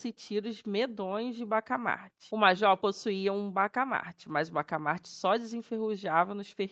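No technical fault can be heard in this speech clip: it carries the character of a call's microphone processing and an Opus-coded call path, with nothing above 8 kHz and the usual coding noise you would expect from a setting around 20 kbps.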